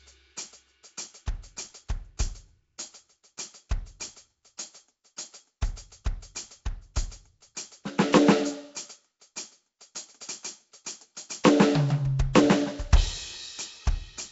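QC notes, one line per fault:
Throughout, Nellymoser compression: the music has a rough, hissy haze and a smeared, underwater feel, with nothing above 7.7 kHz. Likely the old Flash codec starving weak bands of bits and filling them with noise, which fits a 32 kbps stream.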